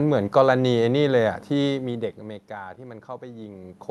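Nothing here points to a technical fault; the room noise and the shifts in level around 1.5 and 3.5 s as the talker moves are part of the recording itself.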